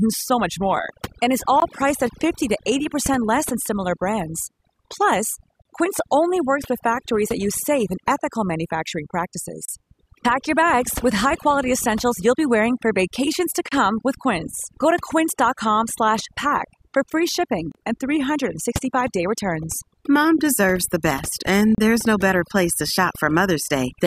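From start to end the background drops and breaks up into twinkling specks. This is overdone noise removal: noise reduction set too strong turns individual frequency bands far down whenever they sit near its noise estimate, taking quiet parts of the voice with them.

Brief dropouts cut into the speech with smeared edges, then the sound resumes where it stopped. The first, at 1.60 s, lasts about 19 ms. The rest last 32 ms each: 5.62 s, 9.65 s, 13.68 s (after "wearing for vacations to"), 17.72 s (after "for free") and 21.75 s (after "best and", before "there's no better place"). These are gaps at joins of encoded pieces. Arriving every 4 s, they point to segments encoded separately and joined untrimmed, so encoder start delay and end-frame padding remain as silence.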